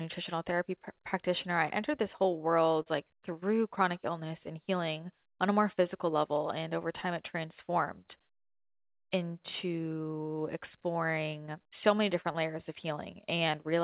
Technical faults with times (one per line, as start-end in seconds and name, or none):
2.82-2.88 short concealed packet loss
12.32-12.36 short concealed packet loss